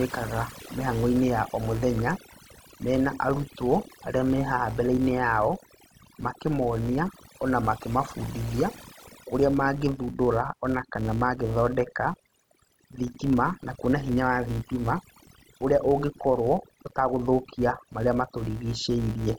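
Throughout the clip the background drops to near silence sprinkled with twinkling specks. This is overdone noise removal: the reduction was set so hard that individual frequency bands near its noise estimate get cut away, taking quieter parts of the voice with them.

Running under the whole clip is a steady buzz at 172 Hz that rises and falls with the speech level. It comes from a filter restarted on every block, which fits a 256-sample block: the filter loses its state each time and starts from silence, so every block opens with a small transient.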